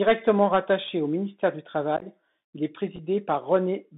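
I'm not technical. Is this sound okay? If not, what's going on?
No, not quite. The whole clip runs through a Bluetooth CVSD headset codec, the old phone-quality headset link. It keeps only roughly 150 Hz to 3.7 kHz, so the speech sounds thin and boxy, s sounds come out scratchy, and there's a grainy hiss underneath.

There's also unconcealed Bluetooth headset packet loss. Right after "rattaché au ministère du", from about 1.97 to 2.06 s, little chunks of the speech drop out and leave a choppy, crackly patch before "il est". A shorter rough spot follows just after "il est", around 2.96 to 3.00 s.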